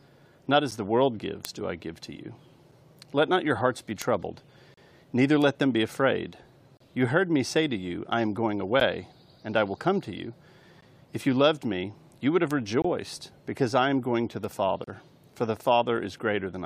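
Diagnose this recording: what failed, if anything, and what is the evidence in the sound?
Streaming playback: segment timestamps left gaps filled with silence, so hard-edged holes of 9 to 33 ms appear at 0.71, 4.74, 6.77, 8.80, 10.81, 12.82 and 14.84 s, roughly every 2 s.

Digital link or storage: bit error spikes, where a flipped bit briefly jumps one or two samples, sound as sharp broadband ticks at 1.45, 4.02, 5.42, 12.51 and 14.44 s.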